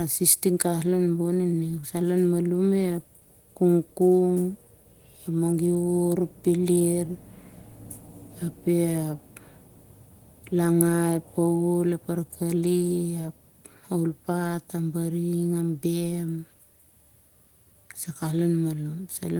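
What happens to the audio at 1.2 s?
At 1.2 s the speech is intact, with no fault at that moment.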